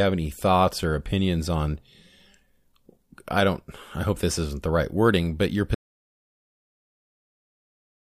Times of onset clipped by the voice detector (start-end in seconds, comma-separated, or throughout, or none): none